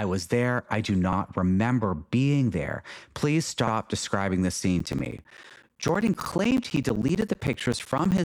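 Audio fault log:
1.13–1.18 s, 3.68–3.73 s, 6.23–6.28 s: overlapping chunks. A 50 ms segment plays twice at each join, heard as a stutter between "was there I do" and "remember being there", just before "describing the scene", and at 6.23 s. The even 2.5 s spacing points to chunked processing where each block restarts early.
4.79 s to end: periodic USB or driver dropouts. After "describing the scene", brief slices of signal are replaced by silence every 64 ms, giving a steady tick train heard only while sound is present. This fits a recurring bus or driver stall interrupting audio delivery.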